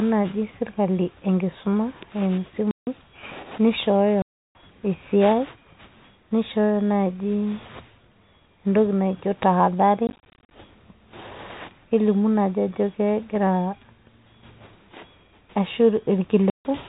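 Packet loss filled with silence chops the speech at 2.71–2.87 s (160 ms), 4.22–4.55 s (330 ms) and 16.5–16.65 s (150 ms). Between 10.07 and 10.51 s, 240 ms is lost in scattered holes, the longest about 40 ms. The gap lengths fit 10 ms packets. On the waveform each gap is a flat silent line with abrupt edges. On a spectrogram it shows as a blank column, and the G.711 telephone band above it stops at 4 kHz.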